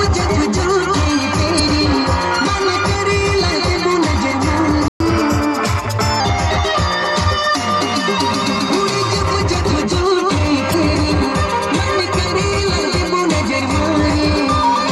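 At 1.56 to 1.60 s, damaged data in a compressed stream trips the decoder: a corrupted stretch of bytes makes it misread frames and hunt for the next valid header. The result is a brief glitch in the sound.

At 4.88 s the audio cuts out for 120 ms, until 5.00 s. This is a playback stall, most likely the player running short of buffered data or its thread being held up, so output falls silent mid-flow before resuming.

From 5.00 to 6.20 s the player works off its backlog with catch-up at higher speed, resampling to run 1.1 times fast. Tempo and pitch both rise, by about a semitone and a half, then settle back to normal once the lost time is recovered.

At 10.70 to 10.74 s the decoder again hits damaged data in a compressed stream and loses frame sync, producing another short glitch as it locks onto the next good frame.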